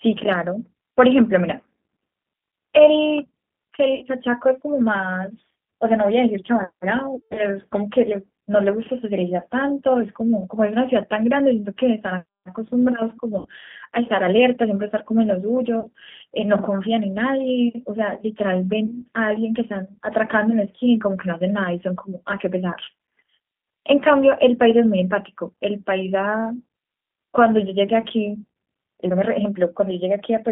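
Throughout, the speech has the rough, synthetic texture and 200 Hz to 3.6 kHz band of the G.729 codec, consistent with an 8 kbit/s stream. VoIP packet loss concealed by the speech codec occurs at 3.95 to 4.06 s (60 ms lost), 7.15 to 7.46 s (160 ms scattered over 200 ms), 13.39 to 13.48 s (60 ms), 15.80 to 15.88 s (40 ms) and 18.86 to 19.01 s (20 ms). At each gap the decoder stretches the last sound into a fading buzz or coloured noise, and the recovery stays weak afterward.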